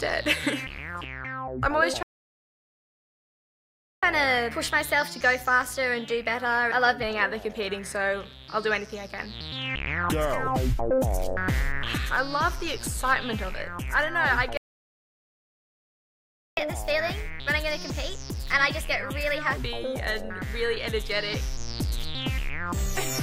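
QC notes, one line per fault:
2.03–4.03 s and 14.57–16.57 s, playback stall: the output goes completely silent for 2 s each time, cutting the sound off mid-flow. The likely cause is the player running out of buffered data or its thread being blocked. The sound pauses for a noticeable time, and some of the lost time is then made up by the passage that follows.
4.03–7.03 s and 16.57–19.57 s, catch-up at higher speed: straight after each stall the sound runs fast for 3 s, at 1.1 times normal speed in the first case and 1.15 times in the second. Because the player resamples its backlog, pitch rises with tempo, by about one and a half semitones and then about two, before both drop back to normal. That tie to the stalls and the paired rise in speed and pitch distinguish it from a plain pitch shift or a deliberate tempo change.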